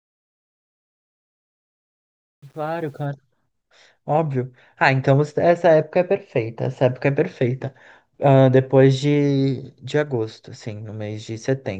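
From the start of the clip to about 3.06 s, the fade-in of the speech sounds gritty, most badly from 0.0 to 2.46 s, before the level rises cleanly. This is truncation distortion on a fade: the fade stage keeps too few bits and adds no dither, which fits roughly 9-bit resolution, so at low levels the waveform collapses into a few coarse square steps.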